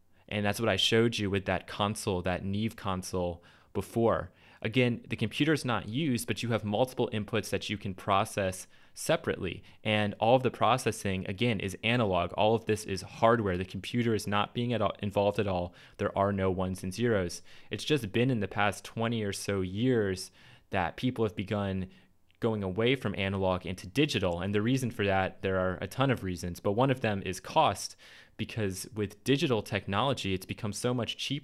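Nothing here stands out as a technical fault; the audio just runs along steadily with no glitches or dropouts to point to.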